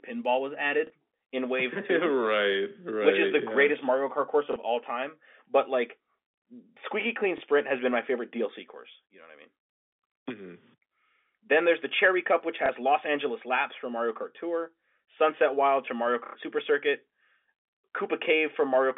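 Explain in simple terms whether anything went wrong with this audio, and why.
Some packets were lost, and the receiver filled each gap by replaying the last packet, which is called packet loss with last packet repeated. Small blips result at 0.87, 4.53 (before "all time"), 7.38 (before "has been my favorite") and 12.66 s, each about 30 ms, plus a longer 90 ms buzz at 16.26 s.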